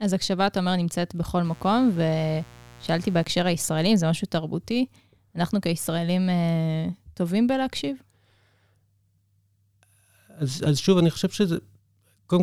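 A speech clip with a mains buzz from 1.45 to 3.24 s. It is a steady, raspy buzz sitting roughly 25 dB below the speech. It is built on 60 Hz harmonics reaching up into the kilohertz range. Sharp switching spikes from a dimmer, rectifier or poor shielding are entering twice per mains cycle.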